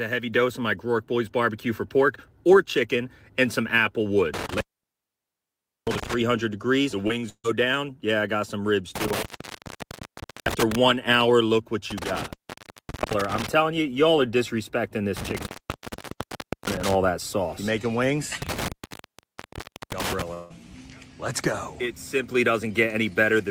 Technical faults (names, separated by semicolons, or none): intermittent contact; short concealed packet loss; burst of packet loss; long network dropout